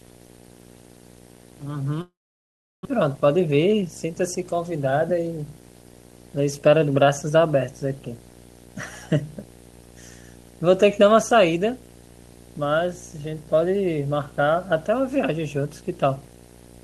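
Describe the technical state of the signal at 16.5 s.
At 16.5 s the speech still carries video or display buzz, which runs through the whole clip. A screen or video cable is coupling into the audio path, adding a buzz at the 59.94 Hz field rate with hash above it and a thin whine at the 15.7 kHz line rate, sitting roughly 15 dB under the speech. On a spectrogram it shows as a stack of harmonics from 59.94 Hz upward and a steady line near 15.7 kHz.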